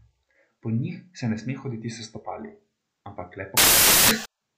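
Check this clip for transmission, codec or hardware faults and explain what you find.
One fault is present: samples built from the wrong bytes, from 3.57 s to 4.26 s, right after "s stopali ampak le". The decoder is assembling each sample from misaligned or swapped bytes, so the rapidly varying low-order bits land in the most significant position. The speech turns into loud, harsh broadband noise for about 0.7 s. On a waveform the segment becomes a solid, dense block. A spectrogram shows dense broadband energy in place of the speech.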